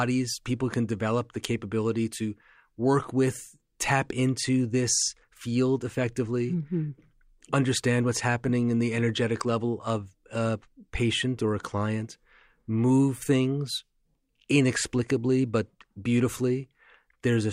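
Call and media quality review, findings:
No audible faults found in this speech clip; no action required.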